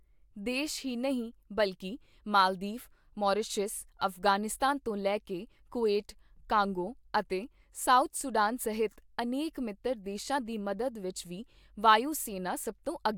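No technical faults can be heard anywhere in the recording.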